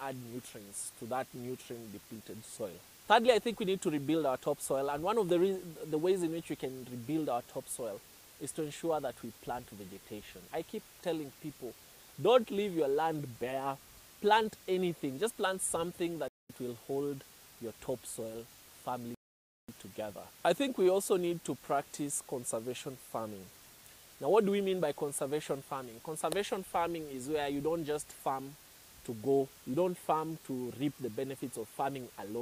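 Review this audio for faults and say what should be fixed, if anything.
Playback stall from 16.28 to 16.50 s: the sound halts mid-flow for 0.21 s of silence, then carries on. The likely cause is the player's output thread being blocked or briefly starved of data. Prevent it by raising audio-thread priority and enlarging the output buffer.

Rebuffering stall from 19.15 to 19.69 s: the audio drops to silence and resumes exactly where it stopped. Nothing is lost, but 0.54 s is added. The player ran out of downloaded audio and waited for more. Prevent it by buffering further ahead before and during playback.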